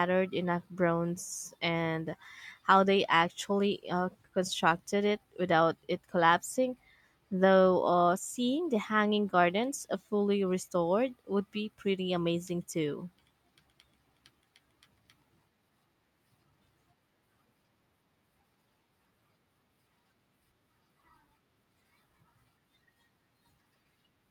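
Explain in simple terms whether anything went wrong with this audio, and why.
Nothing went wrong with this recording, as no technical faults can be heard anywhere in it. The speech comes through steadily from the beginning to the end, without any breaks, jumps or sudden changes in the sound.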